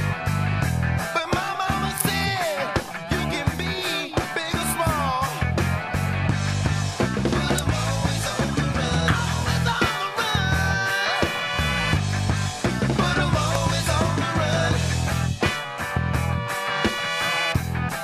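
Three sharp snaps sit on top of the sound. The first runs from 1.98 to 2.01 s. Two more follow at 7.58 s and 13.55 s. Each peaks near -5 dBFS. These are electrical switching spikes. The likely cause is a nearby switch, motor or static discharge arcing, with the audio line picking up each burst as a hard transient.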